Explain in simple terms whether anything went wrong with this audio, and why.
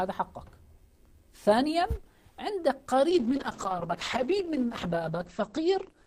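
Something does go wrong, starting at about 3.11 s and lasting to the end. That's a call bitrate drop: the connection seemed to get squeezed, so the encoder switched to sending far less detail. The sound loses its crispness and turns muffled and a bit rough, because everything above roughly 8 kHz gets cut off. It bottoms out for about the last 2.2 s and never recovers before the clip ends.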